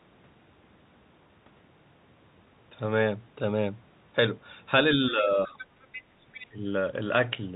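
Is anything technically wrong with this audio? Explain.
Yes. The speech has two echo-control faults, heard through a telephone-band channel that cuts everything above 4 kHz.

Speech suppressed in double talk occurs from 4.95 to 5.64 s and again from 6.49 to 6.65 s. The talker's level dips, by about 15 dB and then about 20 dB. The likely cause is an echo canceller turning down both voices while both sides spoke at once.

The other side's voice leaks through at 5.58 to 5.66 s, 5.83 to 6.03 s, and 6.23 to 6.47 s. These are faint scraps of a second voice, roughly 15 to 20 dB below the talker. They are likely loudspeaker playback that the echo canceller failed to remove.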